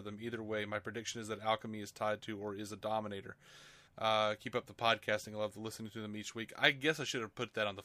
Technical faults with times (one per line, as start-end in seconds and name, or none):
none